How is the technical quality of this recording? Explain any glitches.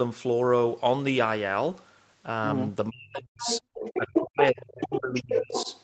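The recording has two echo-control faults in its second half, both on a call path whose audio stops at 8 kHz.

Speech suppressed in double talk, from 2.89 to 3.62 s and again from 3.97 to 5.68 s: the speech dips sharply, falling by roughly 40 dB in the first stretch and about 30 dB in the second. The likely cause is that both parties talked at once, and the echo canceller, unable to separate the local voice from loudspeaker echo, attenuated everything.

Other side's voice leaking through, from 3.39 to 4.24 s, 4.42 to 4.99 s and 5.15 to 5.8 s: a second voice is audible, only about 5 dB below the main speech. It is likely residual loudspeaker echo that the canceller failed to remove from the microphone signal.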